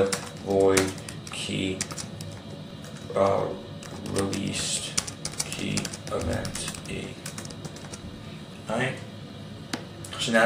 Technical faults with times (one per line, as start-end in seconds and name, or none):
2.70 repeated buffer
9.30 repeated buffer